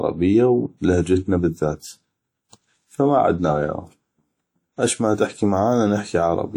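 Throughout the speech, the sound rings and smears, with hiss that swells and fades with the signal, likely WMA compression at a low bitrate, consistent with about 48 kbps.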